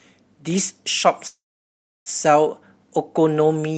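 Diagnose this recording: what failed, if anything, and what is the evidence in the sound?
At the network and jitter-buffer stage, a call audio freeze runs from 1.27 to 2.09 s. The last sound trails into a fading buzz or hiss, then about 0.67 s of silence, and the speech resumes where it stopped. Unlike a packet-loss dropout, nothing is missing. Everything afterwards is 0.79 s late, likely because delayed packets let the buffer run dry.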